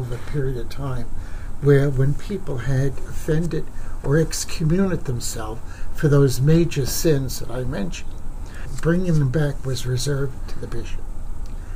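Nothing stood out on listening to this audio.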